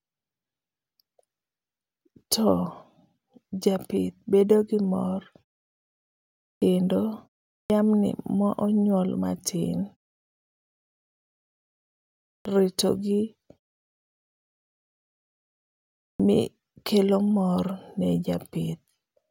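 Clipped start after a pause occurs at 6.54, 7.63, 12.38 and 16.12 s. An output that has dropped idle during silence, after pauses of 0.43 to 2.61 s, loses the first 69 to 78 ms of each sound, so speech begins abruptly.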